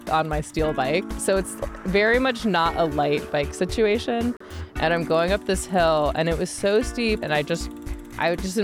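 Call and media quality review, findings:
Gap between stream segments at 4.37 to 4.41 s. Hard-edged silent hole, about 37 ms. Abrupt cut in, abrupt resume, no fade. Probable component: segment stitching in the player. Timestamps of adjacent segments leave a small gap, filled with silence. Segment length 4 s. Nothing skipped, just delayed by the added silence.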